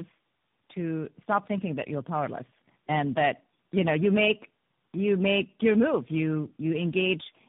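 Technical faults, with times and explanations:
Throughout, tandem speech coding: the speech passes through three low-rate coders in a row, consistent with AMR-NB, G.726 and AMR-NB again, each re-coding the previous one's errors. This leaves the sound rough, muffled and warbly, with nothing above 3.8 kHz.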